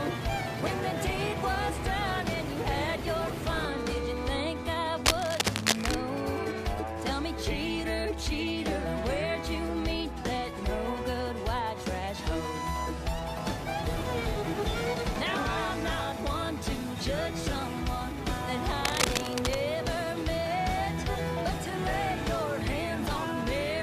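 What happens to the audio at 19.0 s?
From 18.85 to 19.57 s, cable scratch noise: dense, irregular rustling about as loud as the sound, likely from a worn contact shifting, unlike evenly spaced clicks.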